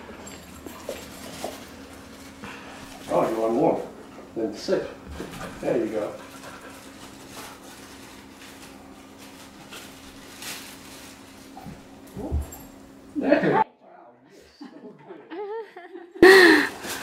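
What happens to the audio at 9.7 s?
Nothing goes wrong at 9.7 s; the audio plays through that moment intact, with no dropout, click, distortion or other audible fault.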